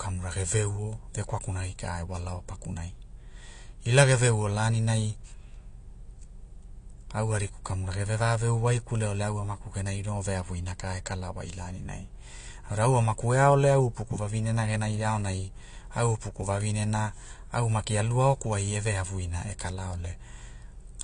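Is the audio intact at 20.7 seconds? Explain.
No. At 20.7 seconds, as across the whole clip, the speech has been squeezed through a lossy encoder, likely AAC compression of the AAC-LC kind, with damage that fits a low bitrate of about 32 kbps. Starved of bits, the encoder discards the top of the spectrum and coarsely quantises what remains, so nothing sounds above 9.8 kHz. The result is plainly audible: a dull, smeared tone with a warbling, fizzy edge on sustained sounds and sibilants.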